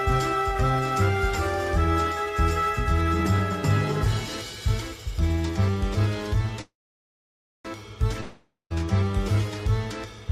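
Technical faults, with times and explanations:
6.61–7.67 s, call audio freeze: the last sound smears briefly, then falls silent for about 0.92 s before the audio resumes exactly where it stopped. This is likely delayed packets draining the jitter buffer. Nothing is lost, but everything afterwards runs about 1.03 s late.
8.21–8.76 s, long network dropout: the sound is carried on as a fading buzz that ends in roughly 0.13 s of silence. The audio then returns without the missing half-second, likely because that stretch never arrived. Unlike the freeze, material is skipped rather than delayed.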